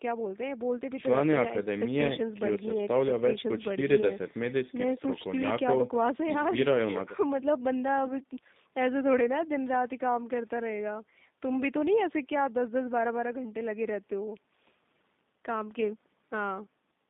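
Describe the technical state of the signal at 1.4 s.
At 1.4 s you're hearing G.729 codec damage, and it's there for the whole clip, not just that moment. The speech has been rebuilt from a vocal tract filter, a pitch predictor and a handful of pulses per 10 ms frame, so it comes across slightly rough and synthetic, and plainly so. The band runs from 150 Hz to 3.7 kHz, nothing above. All of that fits an 8 kbit/s G.729A line.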